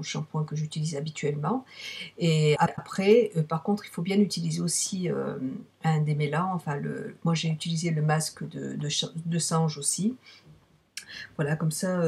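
At 2.55 s the audio garbles briefly and recovers by 2.79 s. This is frames out of order. Two neighbouring runs of coded audio were decoded in swapped sequence. The later block plays first, then the earlier one. Each block lasts about 104.5 ms, which fits runs of four frames each. The result is a short, jumbled flutter where the sound seems to skip ahead and back. Nothing is missing. The timing after the swap stays intact.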